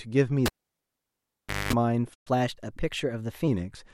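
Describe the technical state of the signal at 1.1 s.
At 1.1 s the signal is absent: the clip is inside a cable pulled and plugged in event running from 0.46 s to 1.73 s. A pop at 0.46 s marks the connector leaving, and about 1.22 s of near silence follows, so this moment sits in that dead gap. While only the tip is in contact, roughly 0.22 s of 50 Hz mains buzz sounds, and a second pop at 1.73 s restores the speech.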